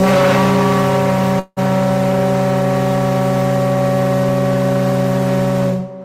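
At 1.39 s the sound stalls until 1.59 s in a call audio freeze. The last moment is stretched into a fading buzz for about 175 ms, ending in roughly 50 ms of near-silence, and then the audio resumes exactly where it stopped, about 175 ms later than before. The likely cause is delayed packets draining the jitter buffer. Unlike a dropout, nothing is cut out. A pause is inserted and the timing shifts.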